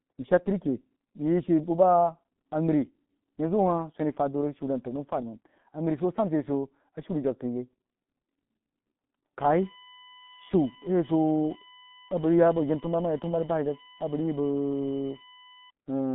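G.723.1 codec damage runs throughout the speech. This early internet-telephony coder squeezes each 30 ms frame into a very small parametric description, and the heavy artefacts here fit a rate of about 6 kbit/s. Everything outside roughly 150 Hz to 3.4 kHz is gone, so the speech sounds muffled and boxed-in. Its slowly updated model of the voice smears the rapid changes, leaving a hoarse, buzzy texture and softened, indistinct consonants.

USB whine enters at 9.38 s and continues to 15.70 s. Current drawn by the USB bus in 1 ms frames leaks into the audio through the power or ground path, imprinting a steady 1 kHz repetition. Its harmonics form a fixed-pitch whine that peaks at 4 kHz, sitting around 15 dB below the speech. The tone stays constant behind the muffled, codec-limited voice and stops before the end of the clip.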